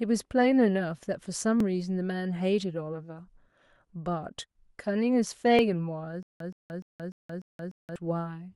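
At 1.60 s and again at 5.59 s there's a tiny skip where the waveform jumps: overlap between stream segments. The 2.0 s segment timestamps overlapped, so the player trimmed a few milliseconds of speech that was never actually doubled.

From 6.23 to 7.96 s you get a stutter with silent gaps: a 122 ms burst of speech replays six times, each followed by about 175 ms of dead digital silence, a steady 297 ms cycle. It's likely the stream stalled and re-served its last fragment on each retry, and the speech meant for that stretch is gone.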